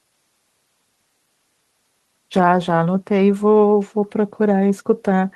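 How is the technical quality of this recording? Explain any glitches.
No glitches or faults are audible.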